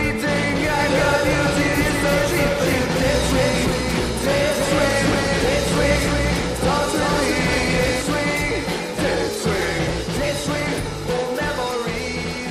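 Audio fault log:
0.80 to 8.02 s, doubled audio track: every sound repeats about 0.3 s later at roughly equal level, with no decay, likely from a second, slower capture path.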